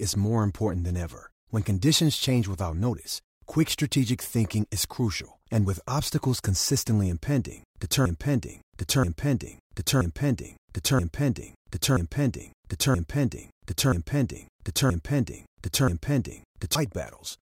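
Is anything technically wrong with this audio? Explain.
Yes. From 8.06 s to 16.75 s, just after "with obstacles consistently impending", there is a broken-record loop. The player, encoder or stream likely stalled and kept resending the last fragment it held. A piece of about 0.98 s plays back to back nine times, each repeat identical, like a stuck record. Whatever should have followed during those roughly nine seconds is missing, and the sound moves on only at 16.75 s.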